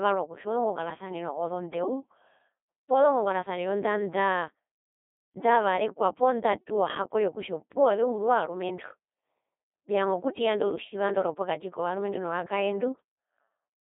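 From start to finish, the speech has passed through a Codec 2 vocoder. The codec does not keep the waveform. It sends only pitch, voicing, energy and a rough spectral envelope, and the decoder rebuilds the voice from sine waves. The damage is heavy, and the sound suggests a rate near 2.4 kbit/s. The voice sounds robotic and buzzy. The band runs roughly from 250 Hz to 3.6 kHz, with nothing above 3.8 kHz.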